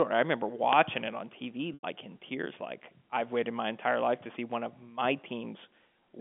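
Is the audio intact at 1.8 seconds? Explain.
No. From 1.74 to 1.83 s, just before "in tears like I've", about 90 ms of packet loss with pitch repetition occurs. The receiver loops the last pitch period, so a brief buzzy hold fades toward silence before a cross-fade back, unlike a plain dropout's abrupt silent gap.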